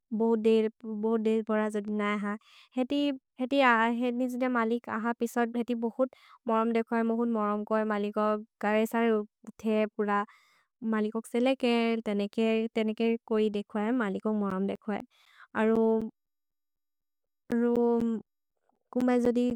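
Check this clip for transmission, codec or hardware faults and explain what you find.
Periodic USB or driver dropouts occur from 14.50 to 19.51 s. Every 0.25 s, about 10 ms of speech drops to silence, likely because a background task stalls the audio path. Their even spacing, heard as a steady ticking over the speech, sets them apart from irregular network packet loss.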